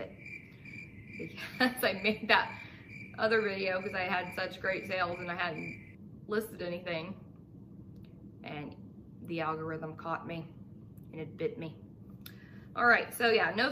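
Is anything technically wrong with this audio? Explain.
No, nothing technically wrong can be heard here.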